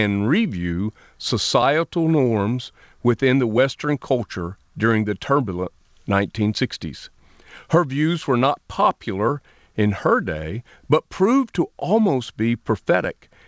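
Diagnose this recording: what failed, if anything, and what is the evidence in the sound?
Nothing in this speech recording points to a failure at any stage of the chain. It has passed through a call path that is working as intended, and the absence of any content above 8 kHz fits a wideband call codec such as G.722.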